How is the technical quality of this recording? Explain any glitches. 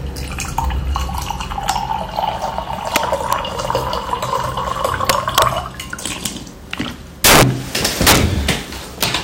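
The recording is marred by harsh, violent cracks on its loudest moments. They come at 1.70 s, 2.96 s, 3.33 s, 6.26 s and 9.03 s as single snaps, and as sustained bursts of crackle from 5.10 to 5.42 s, 7.24 to 7.43 s and 7.85 to 8.17 s. All of them are integer overflow. When a peak exceeded the largest representable integer, by about 0 to 20 dB with the worst stretch at 7.24 s, it wrapped to the opposite extreme instead of being limited. That produces a crack far sharper than ordinary clipping.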